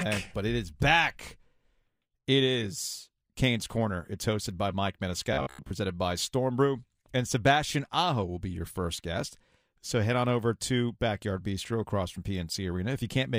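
A speech recording carries robotic sound from repeated short buffers between 5.33 and 5.71 s. The voice collapses into a rigid metallic buzz at 66.8 Hz that still loosely tracks the speech, likely because audio arrived too slowly and playback kept replaying a stretch of about 15 ms for most of that span. On a spectrogram, flat, evenly spaced harmonic lines replace the natural pitch contours; the waveform shows identical short cycles repeating back to back.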